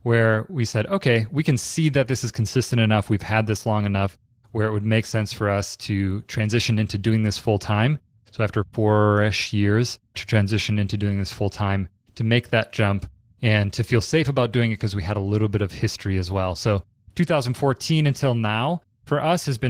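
Opus voice compression runs throughout the speech, its hybrid coding of coarse excitation giving a muffled, hoarse, slightly robotic sound that fits a bitrate around 16 kbps.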